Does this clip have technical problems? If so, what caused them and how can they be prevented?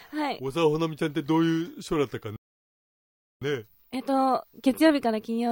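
Yes. A playback stall begins at 2.36 s: the sound cuts off mid-flow and the output stays silent until 3.42 s, a gap of about 1.05 s. The likely cause is the player running out of buffered data or having its audio thread blocked. On a waveform this is a flat line at zero, and on a spectrogram a fully dark vertical band with hard edges on both sides. A deeper playback buffer with higher thread priority would prevent it.

From 3.42 s to the end of the clip, time-compressed catch-up follows. The player runs 1.1 times faster to work off the backlog from the stall, cutting out short pieces and cross-fading across the joins. The pitch stays where it was, but the audio sounds hurried. On a spectrogram, events after 3.42 s sit closer together in time at unchanged frequencies, with smearing at the joins. Avoiding the stall removes the need for catch-up, and a gentler speed-up spread over a longer stretch makes it less noticeable.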